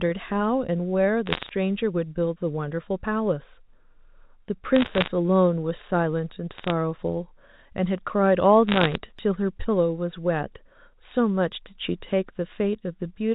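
Four bursts of bit errors on a digital phone line turn up, at 1.26 to 1.50 s, 4.76 to 5.08 s, 6.55 to 6.71 s and 8.68 to 8.95 s. Each flipped bit corrupts a single sample of the G.711 mu-law stream, so when the sign or a high-order bit gets hit you get a sharp tick. At a bit error rate of roughly half a percent or a bit more, those ticks pile up into crackle riding over speech that stays intact underneath.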